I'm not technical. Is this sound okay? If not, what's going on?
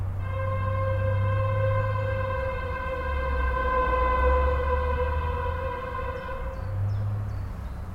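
Yes, nothing in this recording points to a technical fault.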